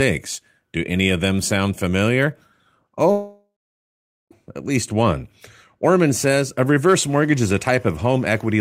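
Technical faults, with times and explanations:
3.11 to 4.33 s, long network dropout: The stream most likely stopped delivering packets for about 1.2 s, and that stretch of speech was lost. The receiver filled the gap by carrying the last sound on as a fading buzz or hiss, which gives way to silence for about 0.81 s of the gap. Speech then resumes at "at least one" with no trace of what was said during the gap, so the sentence jumps ahead.
6.90 to 8.60 s, timecode bleed: Linear timecode from a neighbouring track or cable is leaking into the audio path from just after "says a" to the end of the clip. Its square wave flips between pitches near 1 kHz and 2 kHz, an octave apart, and the rhythm fits 25-frame timecode. Sitting about 35 dB below the speech, it comes through as a steady chirping warble behind the voice.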